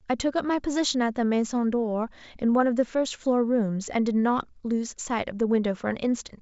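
A speech recording carried over G.722 wideband telephone coding at 64 kbit/s, which keeps the sound clear up to about 7 kHz with at most a faint hiss in the upper band, and no technical fault can be heard anywhere in it.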